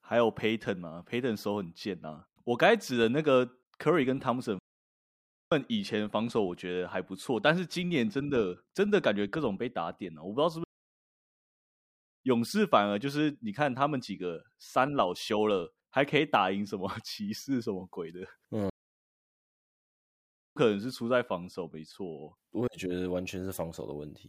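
The player likely ran short of data or had its thread blocked, producing a playback stall three times. The speech halts mid-flow and the output falls silent for 0.93 s from 4.59 s, 1.6 s from 10.64 s, and 1.9 s from 18.70 s before resuming.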